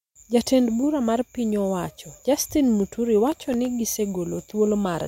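Speech clip with processor overload crackle from 3.27 to 3.66 s: the processor repeatedly failed to deliver audio buffers on time, and each miss left a hard-edged silent gap. Around fifteen dropouts, consistent with buffers of roughly 1.5 ms, merge into gritty crackle.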